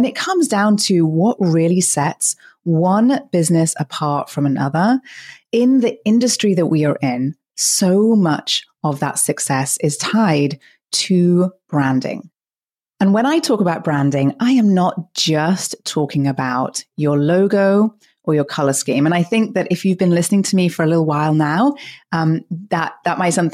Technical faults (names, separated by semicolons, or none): none